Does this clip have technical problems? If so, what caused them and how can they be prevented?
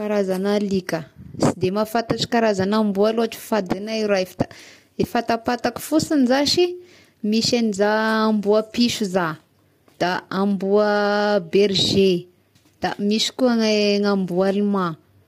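Yes. The speech was likely passed through low-delay AAC compression, the AAC-ELD coding used on video calls, at a rate the damage points to as around 32 kbps. Its short frames of roughly 10 ms resolve closely spaced pitch harmonics less finely than longer frames and use up bits quickly. Throughout the clip the voice is therefore plainly rough and grainy, with noise filling the gaps between harmonics and a top band that sounds dulled or synthetic. Raising the call's bitrate, or using a codec with longer frames where the extra delay is acceptable, prevents this.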